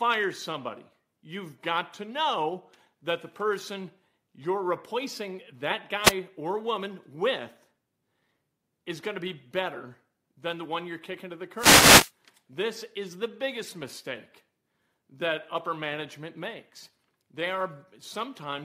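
The analogue FM radio link from the microphone fades twice as reflected signals cancel at the receiver, producing a wireless microphone noise hit each time. From 6.02 to 6.14 s, between "person you're replacing that" and "or woman with", receiver noise rises into a brief swish of static over the speech. A longer fade follows from 11.56 to 12.12 s, just after "you're kicking to the", where the static burst lasts about half a second.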